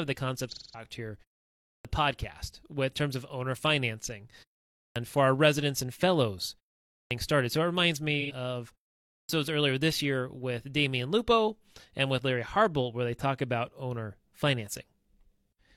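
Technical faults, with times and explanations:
0.48–0.86 s and 8.20–8.32 s, AAC frame loss with concealment: coded audio went missing in two bursts, and the decoder patched each gap by reusing the last good spectrum with scrambled or interpolated detail. The first gap is about 213 ms, which fits five lost frames. The second, just after "it reminds", is about 85 ms, which fits two. Both come out as brief smeared, noisy or phasey patches instead of clean speech.
1.58–1.85 s, 4.67–4.96 s, 6.85–7.11 s and 9.02–9.29 s, clipped start after a pause: each time the output went quiet for roughly 0.3–0.4 s, the playback device dropped into an idle state and needed time to wake and relock. About 260–290 ms of speech was swallowed at each restart, so words begin abruptly out of silence without their opening sounds. This happens right after "terms of owner financing", where the next line lands cut as "for our residents and", and just before "earlier this year with".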